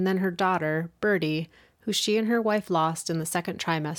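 No technical faults are audible.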